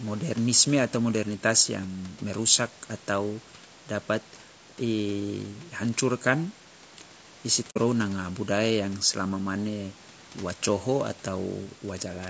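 Speech runs throughout with a rough, grainy texture, most likely from low-delay AAC compression of the AAC-ELD kind used in video calls, at a rate that sounds like roughly 32 kbps. At this low rate the coarse coding leaves noise filling the gaps between the harmonics. On a spectrogram the harmonic stripes look smeared and speckled, with a noisy floor between them. Content stops near 8 kHz, which fits the call path's band limit. At 7.70 to 7.77 s there is AAC frame loss with muting. The decoder zeroed the missing spectrum, so the sound fades down to silence and back up across the overlapping windows rather than cutting off sharply. This leaves a soft hole, about 60 ms of lost audio, consistent with a couple of dropped frames. The waveform shows a brief tapered gap, and the spectrogram shows a narrow blank column with blurred edges.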